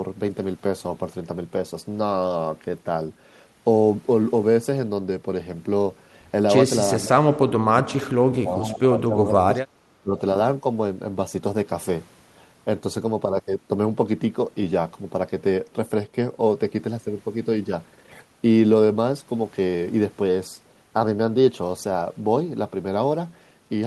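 At 7.04 to 7.18 s the speech briefly sinks by around 10 dB, then from 7.58 to 9.61 s it is cut much harder, dropping by as much as 30 dB in patches, and at 10.02 to 10.16 s it dips again by around 20 dB. This is speech suppressed in double talk, likely an echo canceller mistaking near-end speech for loudspeaker echo and attenuating it. A waveform shows pinched, gappy envelopes; a spectrogram shows faded or missing bands, thinnest at high frequencies.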